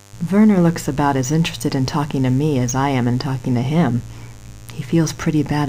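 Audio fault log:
Throughout: mains buzz, a steady raspy hum sitting roughly 25 dB under the sound. Sharp switching spikes from something like a dimmer or rectifier, or a missing shield, land twice every 50 Hz cycle, so their harmonics climb into the kilohertz range and rasp.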